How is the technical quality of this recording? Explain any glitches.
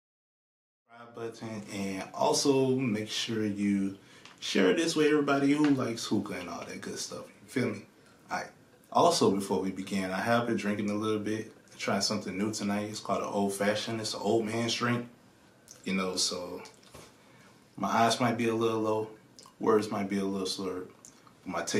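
No glitches can be heard anywhere in the recording, and the only change in level is an intentional smooth fade-in near the start, which rises from around one second and reaches full level at 2.01 s.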